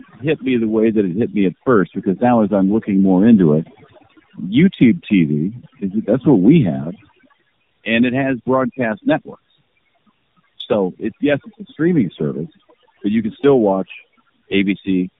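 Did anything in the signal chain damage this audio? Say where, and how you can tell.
Yes. Overdone noise removal runs throughout the speech, at the call-processing stage. The background drops to near silence dotted with twinkling specks. An over-aggressive suppressor is switching off individual frequency bands near its noise estimate, taking quiet speech detail with them.

Tandem speech coding, also throughout, sits at the codec stage. Nothing reaches above 3.8 kHz, and the speech is rough, muffled and warbly beyond what one narrowband coder gives. That points to two AMR-NB encodes in a row, each re-coding the previous one's damaged output.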